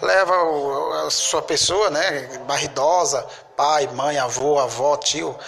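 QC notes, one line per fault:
4.39 s, gap between stream segments: a brief, hard-edged hole of about 12 ms cuts into the sound, dropping to dead silence and snapping straight back with no fade at either edge. The timestamps of two adjacent segments, which run about 4 s long, fail to butt together, so the player pads the space between them with silence. Nothing is removed. The audio on either side is intact, and the clip simply runs 12.2 ms longer than the source.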